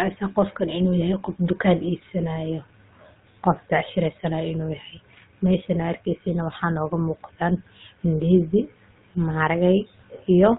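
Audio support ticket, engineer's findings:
Buzzy, gravelly roughness across the whole speech clip, nothing above 4 kHz. Culprit: GSM full-rate codec, sound fits its 13 kbps mode. Vocal-tract model fed by regular pulse excitation, two in three excitation samples dropped. Damage plainly audible throughout.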